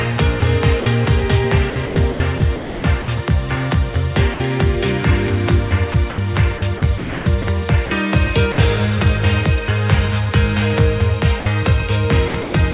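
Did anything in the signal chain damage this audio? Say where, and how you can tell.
Yes. Sound chopped by the voice detector appears in call processing. Between 0.4 and 0.86 s, 1.7 and 3.08 s, 5.92 and 7.9 s, and from 12.28 s to the end, the sound repeatedly gives way to synthetic noise. The holes total 80, 600, 520 and 200 ms. The likely cause is a sender voice detector toggling transmission off and on.

Sound dropped by the voice detector shows three single 60 ms gaps, at 4.34 to 4.4 s, 8.52 to 8.58 s, and 11.4 to 11.46 s. Each is filled with steady comfort noise before the sound resumes. The likely cause is the detector briefly mistaking the sound for background and pausing transmission.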